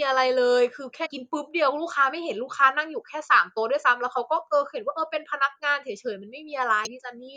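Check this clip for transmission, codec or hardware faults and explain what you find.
Two short faults are present in this speech clip, both damaged data in a compressed stream, at 1.05 to 1.07 s and 6.85 to 6.87 s. Corrupted bytes made the decoder misread those frames and lose sync until it found the next valid frame header, producing a brief squawk or blip each time.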